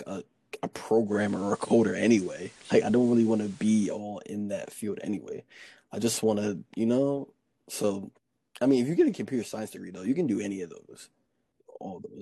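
Speech with digital radio blending to analogue from 1.05 to 4.03 s: the receiver cross-fades over 186 ms to FM, so a spectrogram shows content ending near 15 kHz plus a faint hiss floor roughly 30 dB down, and the waveform steps about 4 dB in level.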